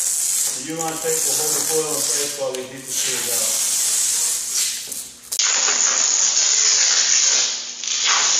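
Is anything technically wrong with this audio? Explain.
Yes. From 5.37 s to the end, the input appears to switch to a poorer device, most likely the system moving its capture to another microphone or a headset's call profile. The replacement path cuts everything above 7 kHz, so the sound turns dull and boxy. A brief gap of about 20 ms marks the changeover, the level shifts by roughly 5 dB, and a new, faint background noise appears well below the signal.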